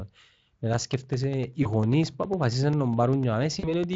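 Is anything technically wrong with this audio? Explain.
Yes, there are two faults in this speech.

From 0.74 s to 3.94 s, regular ticks sound every 0.1 s. These are periodic USB or driver dropouts: roughly thirty gaps of about 2 ms of silence, each from the driver briefly stalling.

At 1.63 to 1.68 s and 3.59 to 3.67 s, the voice smears into a fading buzzy tone or coloured noise. This is VoIP packet loss concealed by the speech codec, where the decoder extrapolates across 20 ms and then 40 ms of missing audio, which fits one and then two lost frames.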